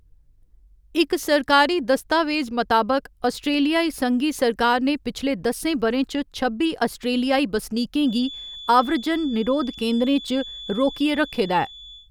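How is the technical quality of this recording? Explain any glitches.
The recording has one clear glitch, a feedback whistle that comes in at 8.00 s and runs to the end of the clip. A thin, steady tone at 3.4 kHz sits behind the speech, well below it in level, swelling and fading slowly but never building up. The likely cause is the loudspeaker sound being picked up again by the microphone, with the loop held right at the edge of feedback, so this single frequency keeps ringing without running away into a howl.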